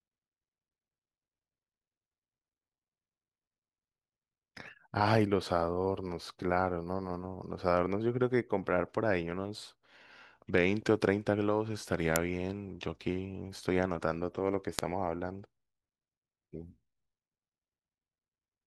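At 12.16 s and again at 14.79 s the speech is broken by an uninitialised buffer: leftover memory played as samples, giving a brief, harsh digital crack. The waveform shows a sudden block about 1.3 ms, then 0.7 ms long, fitting 64- and 32-sample buffers, seen as thin vertical broadband lines on a spectrogram.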